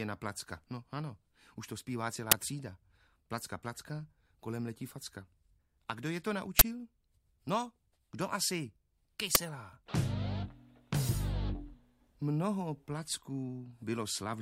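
At 2.32 s, 6.59–6.61 s and 9.35 s, uninitialised buffer bursts play leftover memory as loud digital noise, fitting 512- and 1024-sample blocks. They show as large waveform spikes and broadband spectrogram stripes.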